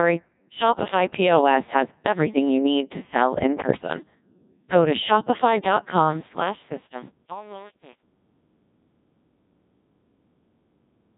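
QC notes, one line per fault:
throughout: Codec 2 vocoder, heavy damage. The speech is resynthesised from sine waves following pitch, voicing and a coarse envelope, so it turns robotic and buzzy rather than just muffled, with nothing above 3.8 kHz, at 1.6 kbit/s.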